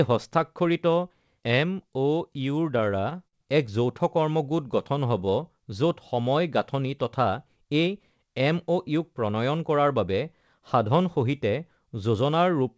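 From 2.78 to 3.70 s there's a run of repeated stalls, a stutter: the jitter buffer kept running dry, and eight times the receiver stretched out the last sound to cover the wait. That's about 116 ms of filler, the longest gap 51 ms, with nothing actually lost. It just drags and hiccups.

Then 4.68 to 5.44 s is a jitter buffer slow-down. The receiver was rebuilding its reserve by repeating tiny pitch-period chunks, adding 73 ms, so the speech plays at roughly 91% speed at unchanged pitch and sounds drawn out.

Finally, 7.57 to 7.88 s has a jitter buffer speed-up going the other way. Too much audio had piled up, so short pitch-period slices were trimmed out, about 50 ms in total, pushing it to about 113% speed, and it sounds a bit rushed there. Through all of this, the call path's band limit, with nothing above 8 kHz, fits a wideband codec like G.722.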